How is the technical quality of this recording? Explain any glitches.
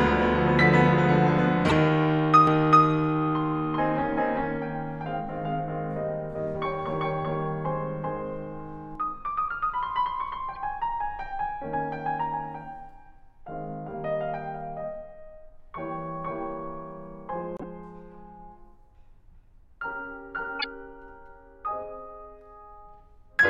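The recording is marred by several decoding glitches and a stretch of doubled sound in this music clip.

Corrupt frame decoded, at 1.69 to 1.72 s, 10.54 to 10.57 s and 20.59 to 20.65 s: each time, flipped bits in a couple of compressed frames went through the decoder, misplacing spectral energy. The result is a brief chirp or noise burst, loud at 1.69 s (peaking near about -10 dBFS), fainter at 20.59 s (about -15 dBFS), and quietest at 10.54 s (about -35 dBFS).

Doubled audio track, from 2.47 to 8.95 s: a second copy of the music, likely captured again through a slower path, is mixed in roughly 400 ms behind at about the same level. It sounds like a dry, full-band repeat with no decay, switching on and off abruptly.

Corrupt frame muted, at 17.57 to 17.64 s: here the decoder rejected the damaged frames and the player substituted silence, leaving an abrupt hole of about 70 ms, which fits a few lost frames, while the music resumes in time afterward.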